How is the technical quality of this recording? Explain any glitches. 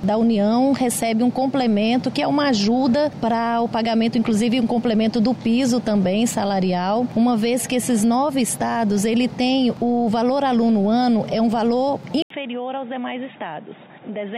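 The recording has one clear problem near the end. At 12.22 s the sound cuts out for about 80 ms. It returns duller and boxier, with nothing above 3.8 kHz. The level drops by roughly 10 dB, and a faint new background noise sits well below the signal. It stays this way to the end. The likely cause is an input switched to a poorer device. The narrower band, lower level and different noise all point to that change.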